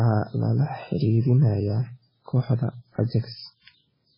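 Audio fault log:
throughout MP3 compression: watery speech with nothing above 5.3 kHz, a hard spectrogram ceiling and flickering gaps beneath it, likely from a low bitrate near 16 kbps.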